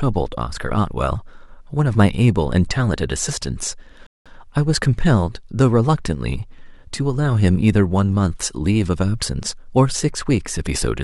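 At 4.07 s a rebuffering stall inserts 0.19 s of silence; the speech then resumes exactly where it stopped, so unlike a dropout, nothing is skipped.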